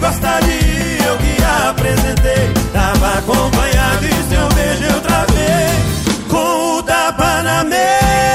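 No technical faults can be heard anywhere in the signal.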